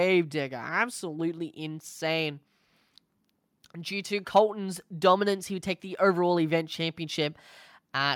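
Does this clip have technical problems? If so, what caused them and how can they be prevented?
No, this clip has no technical problems, so there is nothing to trace to a cause or to prevent.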